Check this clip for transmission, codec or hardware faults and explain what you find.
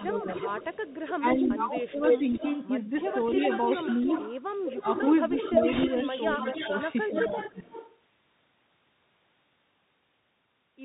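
The speech carries codec damage throughout, with an echo running through most of it, several level dips, and one short burst of noise.

Bluetooth CVSD headset codec, whole clip: the sound is cut off above 4 kHz, with a granular hiss beneath it and scratchy s sounds. This points to 64 kbps CVSD, whose one-bit up-or-down steps fall behind loud, fast high content. That granular hiss and slope distortion set it apart from a plain band-limited codec.

Echo leak, 0 to 2.68 s and 3.0 to 7.98 s: a second copy of the speech trails the first by about 0.29 s, then about 0.30 s, at roughly 5 dB below it. The likely cause is a loudspeaker on one end whose echo canceller let part of the signal back through. The fixed delay and separate repeat distinguish it from room reverberation, which smears the sound rather than repeating it.

Speech suppressed in double talk, 0.09 to 0.66 s, 1.18 to 2.27 s and 7.09 to 7.72 s: the speech dips by around 10 dB, then around 15 dB, then around 10 dB again. 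The dips total about a fifth of a second in the first and last spans and about half a second in the middle one. Each falls inside an echo span, which suggests an echo canceller turning the signal down while both ends talk. The speech level ducks with the echo present, which separates this from packet loss.

Bit errors on a Bluetooth voice link, 5.72 to 5.85 s: a brief rushing crackle sits on the speech, consistent with an error rate of around 5 percent on the CVSD link. Because each bit moves the signal only one small step, there are no sharp clicks, and this is what tells it apart from a dropout or a digital glitch.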